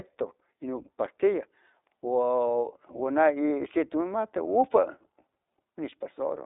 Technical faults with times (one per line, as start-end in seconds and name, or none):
0.00-6.46 iLBC codec
3.48-3.50 lost iLBC frames
5.90-5.93 lost iLBC frames